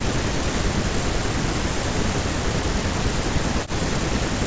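From 0.02 s onward the speech dips, falling around 40 dB at its deepest and gouging holes in the waveform. This is likely speech suppressed in double talk.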